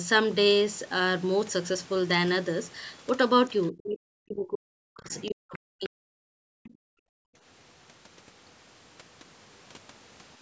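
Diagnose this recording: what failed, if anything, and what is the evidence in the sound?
Call processing stage: from 3.71 to 6.17 s the speech dips very deeply and breaks up for about two seconds in total, likely speech suppressed in double talk by the echo canceller. The canceller ducks the whole talker, not just an echo.

A faint second voice about 25 dB below the speech appears at 5.53 and 6.64 s, likely the other side's voice leaking through as residual loudspeaker echo. It is an added voice rather than a loss of level.

From 6.45 to 7.35 s the room background drops by about 38 dB for roughly 0.7 s, then returns. This is background gated by the echo canceller, which shuts the microphone while the loudspeaker plays.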